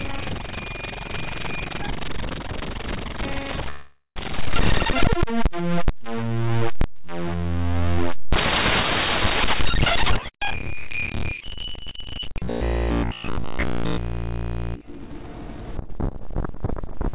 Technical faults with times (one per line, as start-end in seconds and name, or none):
3.70-4.18 call audio freeze
4.50-4.52 skip ahead
4.73-6.47 jitter buffer slow-down
9.34-12.44 jitter buffer speed-up
13.29-13.92 jitter buffer speed-up
14.97-16.08 jitter buffer speed-up